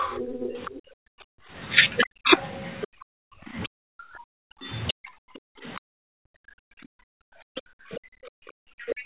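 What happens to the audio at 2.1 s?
Three faults overlap here. Other side's voice leaking through runs from 0.0 to 4.93 s: a second, fainter voice sits roughly 20 dB under the talker. Its likely cause is loudspeaker playback the echo canceller failed to remove. Unlike suppression, this adds sound rather than removing it.

Speech suppressed in double talk spans 0.93 to 5.1 s: the talker's own voice dips, in places by around 40 dB, for about a second in total. This is likely the canceller turning everything down while both sides speak. Here the talker itself drops, not only the room.

Background gated by the echo canceller covers 1.25 to 3.47 s: the room tone between words falls away, by about 38 dB at its deepest, then returns. It affects the background bed rather than the voice.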